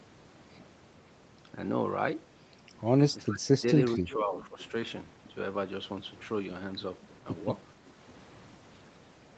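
From 3.29 to 3.62 s the speech sinks by roughly 25 dB, then dips more gently, around 10 dB, from 3.96 to 4.58 s. It is likely speech suppressed in double talk, with the echo canceller ducking the talker while the far end speaks. The level is pulled down rather than cut to silence, unlike a packet-loss dropout.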